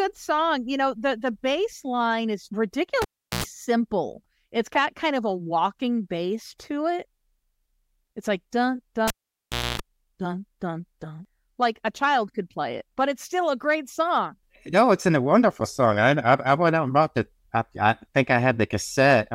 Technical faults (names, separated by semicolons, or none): cable pulled and plugged in